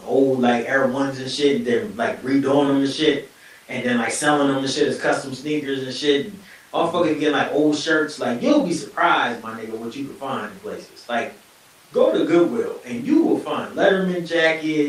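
Nothing stood out on listening to the speech in this recording.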